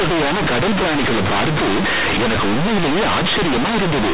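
The speech is buried under loud, harsh, buzzy distortion from start to finish, with quiet passages blown up almost to the level of the loudest ones and a heavy hiss filling the pauses. This is companded audio read as linear: A-law bytes are being played straight as plain 8-bit samples without expansion, so every sign change throws the output across about half its range and the waveform is badly warped. The underlying telephone-band A-law coding itself, at 8,000 samples a second, still shows through in the absence of anything above 4 kHz.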